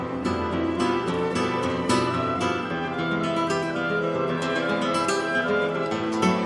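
No technical faults are audible.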